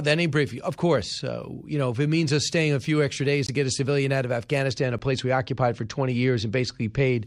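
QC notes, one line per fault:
1.2 s, 3.47–3.49 s and 4.99 s: block of digital silence. Zeros replaced the samples for 5 ms just before "uh you know if", 20 ms between "a few extra days" and "to get a civilian", and 10 ms. The abrupt cut to silence and back is heard as ticks and a brief hole.
4.72–7.24 s: channel delay (comb filtering). From after "a civilian out of", one channel runs a couple of samples late, roughly 0.04 ms. Summed to mono, the shared content cancels with the first notch around 10 kHz, dulling the top end.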